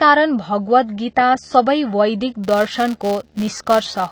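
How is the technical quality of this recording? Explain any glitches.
The recording has three technical problems: a steady low buzz, dulled and smeared speech throughout, and a block-rate buzz over the last part.

A video or display buzz runs under the whole clip at 75 Hz, faint at roughly 40 dB below the speech. A screen or its cable is coupling electrically into the audio path, so the picture's field rate leaks in as a hum-like tone with a rougher, hashy edge above it.

The speech also sounds dull throughout, with a plainly audible swirly, watery texture on sustained vowels and sibilants. The likely cause is AAC compression at a low bitrate. An AAC-LC encoder splits the signal into frequency lines and discards detail a hearing model judges less important. When bits are scarce it drops the top band and coarsely quantises the rest, leaving this smeared, slightly warbling quality.

From 2.44 s to the end at 4.12 s, a filter restarted on every block adds a buzz at 172 Hz. 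The filter loses its internal state at each block boundary and begins again from zero, producing a small transient every time. At this rate the transients fuse into a buzz, which fits a 256-sample block. It rises and falls with the loudness of the speech and is most obvious on louder syllables.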